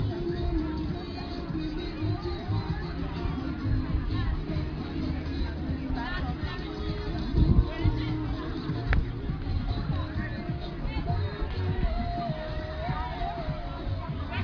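Nothing audible points to a technical problem anywhere in the recording, with the sound holding steady in continuity all the way through.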